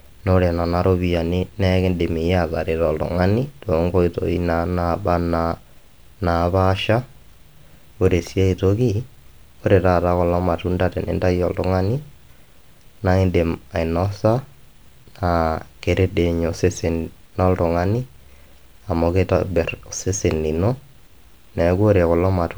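No audible technical faults.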